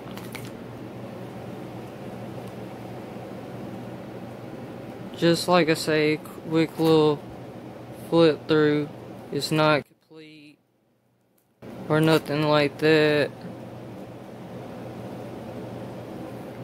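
One channel likely had its polarity inverted from 9.82 to 11.62 s, so centred content cancels and the sound drops by about 26 dB to a faint remnant.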